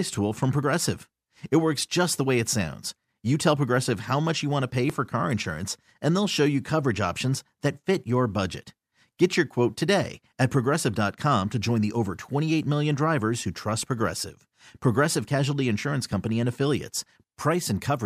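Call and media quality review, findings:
Jump ahead in the speech at 0.63 s, just after "tool from", losing a few tens of milliseconds; a smaller skip at 4.90 s, just before "for car insurance and", around 10 ms. Likely dropped buffer (overrun): capture samples overwritten before being read, with the surrounding audio spliced directly.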